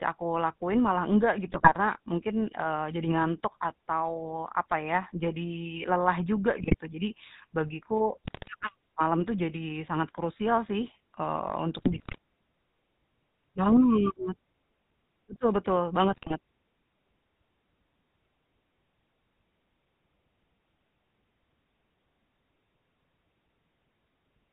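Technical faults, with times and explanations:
Throughout: GSM full-rate codec. The speech carries a plainly audible buzzy, gravelly roughness and nothing above 4 kHz, since the decoder rebuilds the voice from a vocal-tract model fed by coarse, regularly spaced pulses. It is a steady texture, not the sudden bursts of bit errors.
1.52–1.74 s, 6.58–6.75 s, 8.24–8.49 s, 11.78–12.18 s, 16.12–16.33 s: GSM bit errors. Corrupted filter, pitch and gain values make each stretch break into squawks, pops and gargling, with bent spectra and jumps in level. They are brief bursts of about a fifth to four tenths of a second, unlike the constant codec buzz.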